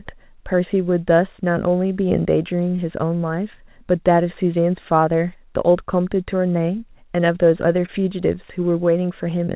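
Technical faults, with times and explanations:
2.76–2.80 s and 7.86–7.90 s, short concealed packet loss: each time about 20 ms of call audio arrived too late to decode, so the receiver extended the preceding sound and crossfaded back, leaving a brief smear or wobble in the 4 kHz-limited G.711 speech.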